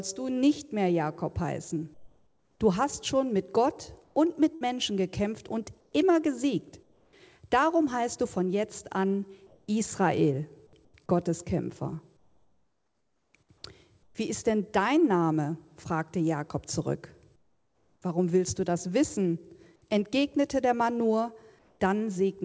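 Comfort noise in place of the background appears at 1.94–2.60 s, where the real background in the pause gives way to a steady, featureless hiss about 6 dB quieter. The likely cause is discontinuous transmission: the sender goes silent when no speech is detected, and the receiver synthesises noise to fill the gap. The same flat substitute returns within 4.04–7.13 s.

Inside that stretch, a burst of packet loss at 4.55–4.64 s is covered by about 60 ms of the last sound held and fading, then the audio resumes with roughly 60 ms skipped.

Comfort noise comes back within 9.47–14.15 s, again at 17.36–18.02 s about 6 dB down, and briefly at 21.59–21.80 s about 2 dB down, all heard against a band that stops at 8 kHz, which fits G.722 at 64 kbps.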